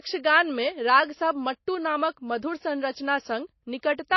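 A short speech recording carries plainly audible MP3 compression from start to finish. Nothing is heard above 5.8 kHz, so the top end sounds dull and boxed in. The s sounds lose their crispness and turn metallic. Weak frequency detail flickers on and off, giving a watery, swirling texture. Word onsets sound smeared. The cause is likely an encoder starved of bits, which fits a very low rate around 24 kbps.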